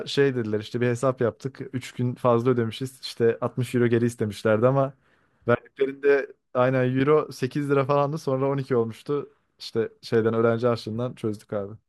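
At 10.15 s, near the end of the speech, a single sharp click cuts through. This points to dropped samples: a fraction of a millisecond likely went missing from the stream, so the waveform leaps straight to a later value. Unlike a dropout, no sound is lost and there is no audible gap. The click is one isolated tick, a thin vertical line across the spectrum, rather than a burst or crackle.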